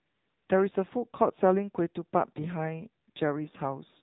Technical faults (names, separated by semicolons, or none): AMR narrowband mobile codec; AMR comfort noise